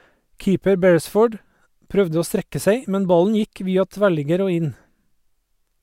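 Nothing technical goes wrong anywhere in this speech recording, so there's no fault to point to at any moment.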